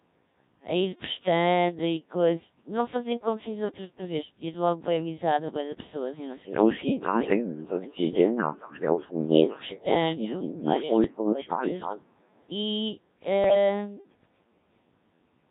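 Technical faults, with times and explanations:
Throughout: Codec 2 vocoder. The speech sounds heavily robotic and buzzy, with a synthetic, sine-like timbre. That texture fits Codec 2 at its 1.3 kbit/s mode. The decoder never receives the actual waveform, only pitch, voicing, energy and a coarse spectral envelope for each frame, and rebuilds the voice from sine waves. Whatever that sparse description cannot capture is lost or replaced with a buzzy approximation.
11.04 to 11.33 s and 13.44 to 13.55 s: bit errors on digital voice radio. In both spots the already synthetic voice suddenly lurches in pitch, loudness and tone colour, breaking into warbles and bleeps. The first burst is longer and milder, consistent with an error rate of about 2 percent across several frames. The second is brief but harsher, nearer 7 percent. At such a low bitrate each flipped bit corrupts a whole frame's parameters.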